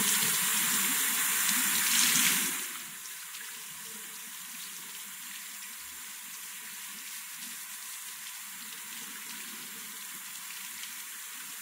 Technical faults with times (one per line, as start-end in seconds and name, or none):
none